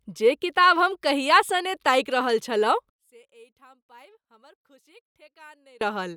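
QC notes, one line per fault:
2.90–5.81 s, one channel inverted: the speech drops by about 31 dB to a faint residue, likely because one stereo channel's polarity flipped, so the shared centre content cancels when summed to mono. The waveform collapses to a near-flat band, and the spectrogram shows energy across the band almost vanishing until 5.81 s.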